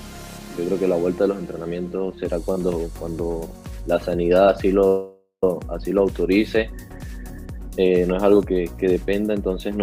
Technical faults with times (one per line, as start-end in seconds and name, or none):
4.87-5.44 call audio freeze